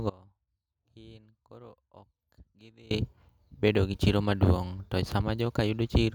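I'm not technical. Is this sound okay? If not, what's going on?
No. There is an audio dropout to a faint residue from 0.10 s to 2.91 s. For about 2.8 seconds the speech is nearly gone, leaving only a very faint sound far below normal level. It cuts out and back in abruptly, not like a natural pause or fade. The likely cause is the signal connection breaking while the equipment after the break kept running, so only faint sound remained.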